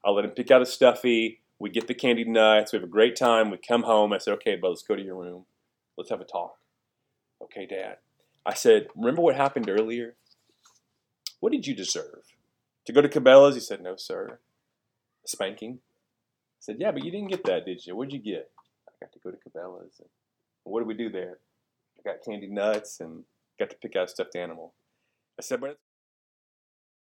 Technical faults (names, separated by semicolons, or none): none